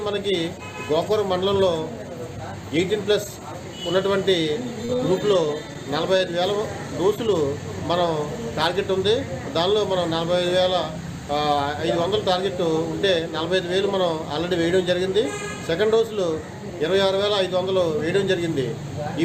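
Two short concealed packet losses sit close together, at 4.85 to 4.91 s and 4.97 to 5.01 s. About 40 ms and 20 ms of audio never arrived, and the receiver covered the gaps by extending the preceding sound before blending back into the real signal, leaving a brief smear or wobble. At 6.17 to 6.21 s a short stall from a late packet occurs: the jitter buffer ran dry, so the last sound was held roughly 21 ms longer until the packet arrived. Nothing is lost, but playback is delayed by that amount from then on.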